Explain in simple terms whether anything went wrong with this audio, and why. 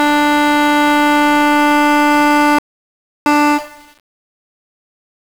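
The music has two problems. Throughout, it's been squeezed with 1-bit DFPWM compression, which keeps just one bit per sample to nudge the signal up or down. That coarse stepping leaves everything fuzzy and crackly, with the treble buried in hiss.

Then there's an audio dropout to silence from 2.59 to 3.26 s, about two-thirds of a second of dead nothing, not even background noise. The input likely got cut off briefly while recording carried on, so that bit of music is simply gone.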